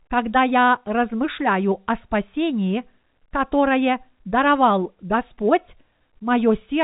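No faults found in this speech; the narrow telephone band, with nothing above 3.8 kHz, is simply the G.711 telephone coding working as designed.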